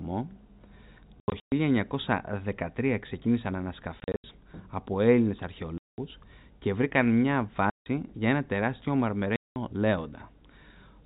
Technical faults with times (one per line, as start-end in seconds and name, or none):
1.20-1.52 packet loss filled with silence
4.00-4.24 packet loss filled with silence
5.78-5.98 packet loss filled with silence
7.70-7.86 packet loss filled with silence
9.36-9.56 packet loss filled with silence